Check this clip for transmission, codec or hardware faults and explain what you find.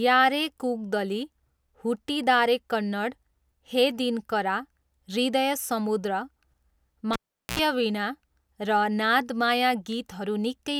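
One hardware fault is present: a cable pulled and plugged in, from 7.13 to 7.59 s. A live input cable was disconnected and reinserted. A pop cuts the speech to near silence for about 0.41 s. Then, with only the plug tip touching, a 75 ms burst of 60 Hz mains buzz breaks through before a second pop brings the sound back.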